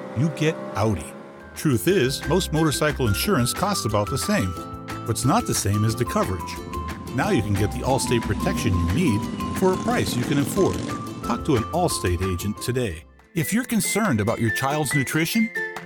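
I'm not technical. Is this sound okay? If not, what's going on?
Yes, this sound is okay. Nothing in it stands out as a technical problem that needs fixing.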